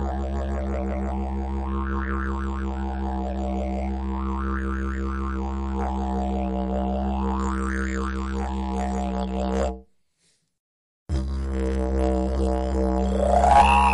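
From 7.40 s to the end of the clip, pre-emphasis is left on. The sound was given an FM-style 75 µs treble lift for transmission, and the matching de-emphasis cut was never applied, so everything above roughly 2 kHz rises steadily to about 14 dB hotter at 10 kHz than at 1 kHz. The sound turns thin, glassy and hissy, with sharp edges spitting. Unlike a high-pass filter, the low end keeps its level. The fault is the rising treble slope.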